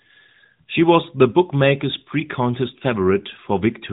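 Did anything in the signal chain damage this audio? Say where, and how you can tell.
No, nothing damaged this audio.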